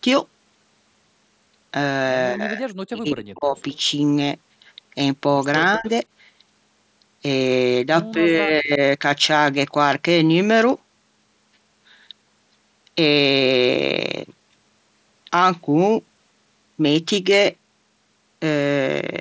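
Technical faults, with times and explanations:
2.33–2.74 s, 2.90–3.57 s, 5.77–5.87 s and 8.15–8.81 s: speech suppressed in double talk. The voice sinks sharply, then returns. The first two dips are deepest, roughly 40 dB and 30 dB down. The later two are shallower, around 15 dB. The likely cause is both ends talking at once. The echo canceller could not tell the near talker from the loudspeaker echo, so it turned everything down.
3.58–3.78 s and 5.73–5.89 s: echo leak. A faint, delayed copy of the voice trails in, 204 ms behind the original. The first scrap sits about 35 dB below the speech. The second is louder, about 20 dB down, and overlaps a brief dip in the voice. This is likely a loudspeaker echo that the far end's canceller did not fully remove, so part of it was sent back down the line.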